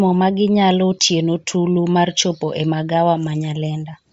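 The speech carries a breathy, grainy edge from start to finish, with the upper register sounding hissy and smeared rather than crisp, and nothing at all above about 7.7 kHz. This is the plainly audible signature of Bluetooth LC3 compression, likely at a low rate that fits roughly 32 kbps with 10 ms frames: the codec discards much of the high spectrum, patches it with synthetic noise, and caps the band.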